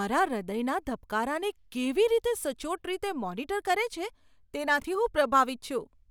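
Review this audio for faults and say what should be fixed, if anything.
Chunks out of order at 4.80–4.84 s: one roughly 21 ms block plays a block late, giving a jumbled blip with three hard joins, visible as waveform discontinuities and vertical spectrogram lines. Prevent it by reassembling blocks by sequence number before playback or writing.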